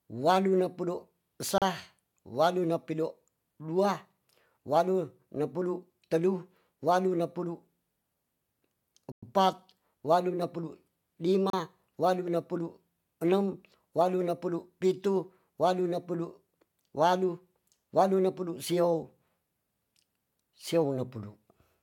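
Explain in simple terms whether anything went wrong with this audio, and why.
Something likely went wrong with the wireless link to the headphones: a Bluetooth stall, where interference delays the radio packets so the headphones run out of buffered audio and wait for the resent ones. In this speech you hear it as three brief drops to silence: at 1.58 to 1.62 s, just after "pido sa"; at 9.12 to 9.23 s, the longest gap at about a tenth of a second, right before "epat wadu"; and at 11.50 to 11.53 s.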